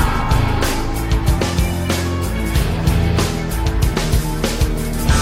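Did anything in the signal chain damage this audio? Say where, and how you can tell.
No, nothing in the chain can be heard damaging this audio at any stage. There are no events to place in time and no sign of a stage misbehaving.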